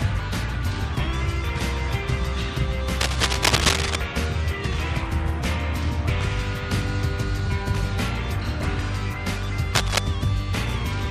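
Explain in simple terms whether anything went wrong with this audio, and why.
Two bursts of cable scratch noise interrupt the audio, from 3.01 to 3.96 s and again from 9.75 to 9.99 s. Each is a rough, crackling rustle laid over the sound, about as loud as the sound itself, so it is hard to miss. The likely cause is a worn cable, plug or knob being moved, so its electrical contact flickers rapidly between good and poor and injects irregular noise into the signal while it shifts.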